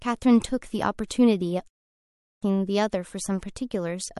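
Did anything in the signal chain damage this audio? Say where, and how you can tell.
Yes. Pre-echo at 1.08 s and 3.41 s is a codec fault: hiss rises about 25 dB and about 22 dB for 25 ms and 16 ms before sharp attacks, consistent with long transform blocks and no short-block switching.

Clipped start after a pause at 1.98 s is a playback fault: after a 0.37 s pause, the output device wakes slowly and swallows the first 0.45 s, so the speech begins abruptly.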